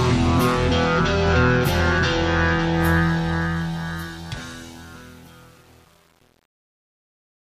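A fade-out stage that keeps too few bits and adds no dither causes truncation distortion: from 2.97 s the fading sound coarsens, and from 3.66 s to 7.43 s it turns gritty, which fits roughly 8-bit resolution.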